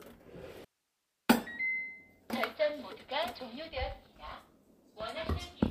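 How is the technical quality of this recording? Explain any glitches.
There's one clear glitch, an audio dropout to a faint residue running from about 0.65 s to 1.29 s. The sound cuts out abruptly for roughly two-thirds of a second, leaving only a low hiss somewhere around 45 dB below the normal level, and then snaps straight back. It's likely the signal feeding the path was interrupted while everything after the break stayed live, so you hear that path's own noise rather than true silence or a natural fade.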